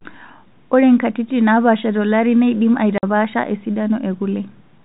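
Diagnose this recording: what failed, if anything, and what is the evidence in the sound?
The network stage failed: packet loss filled with silence. The speech drops out completely from 2.98 to 3.03 s, a 50 ms hole with hard edges, which fits five 10 ms packets going missing and the receiver playing silence rather than concealing the gap. The band-limited G.711 telephone coding is audible as expected.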